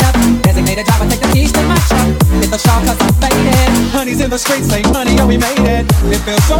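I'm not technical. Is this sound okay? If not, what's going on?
No. Wrong sample rate, from the start to 3.91 seconds: the sound plays about 1.09 times too fast and sits roughly one and a half semitones too high, so it comes across as slightly sped up and raised in pitch. Speed and pitch rise together because the audio is being played back faster than it was made, with nothing correcting the difference. The amount fits audio made at 44.1 kHz being played at 48 kHz.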